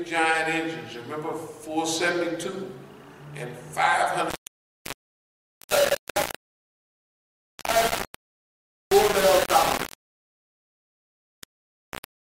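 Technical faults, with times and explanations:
4.30 to 12.22 s, low bit depth without dither: likely undithered rounding to about 3 bits, so harsh grainy distortion tracks the sound, nearly as loud as the sound itself.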